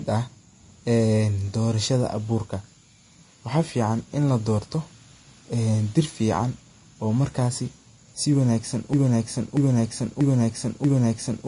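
From the start the speech has two different families of coding artefacts heard together. Nothing is present above about 10.6 kHz. This is likely transcoding between lossy codecs. The mix of artefacts fits an older WMA-style encode that was then re-encoded at a low Vorbis rate of roughly 33 kbit/s. The second encoder spent its scarce bits on the first one's damage while adding its own, and the 10.6 kHz ceiling carried through the chain.

At 8.93 s the sound starts stuttering. A 0.64 s fragment plays four times back to back, identically, and it continues this way to the end of the clip. This is a broken-record loop, likely caused by the player, encoder or stream stalling and repeatedly sending the last fragment it held. Whatever should have played during those final 2.5 seconds is lost.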